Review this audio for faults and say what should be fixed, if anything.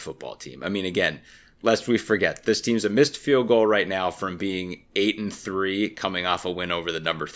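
No faults turn up anywhere in the speech recording. Nothing here needs fixing.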